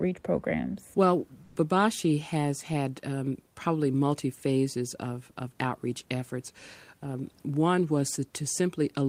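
A speech recording in which, from 1.43 to 1.55 s, a 120 ms stretch of the quiet background gives way to a smooth, featureless hiss that differs in level by about 6 dB from the surrounding room noise, which lies roughly 38 to 40 dB below the speech. This is comfort noise in place of the background, likely because the sender paused transmission during the gap and the receiver synthesised filler noise, which fits discontinuous transmission such as Opus DTX.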